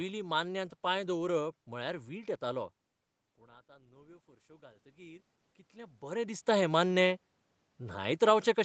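Speech, where from 3.37 to 6.10 s automatic gain rising lifts the level by about 8 dB after the input fell by about 24 dB. Unlike the talker's own movements near 2.5 and 5.5 s, the room noise swells together with the voice.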